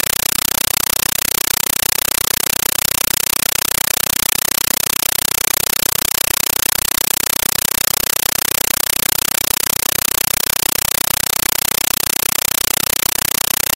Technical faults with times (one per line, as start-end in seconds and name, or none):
0.00-13.76 compressed stream played as audio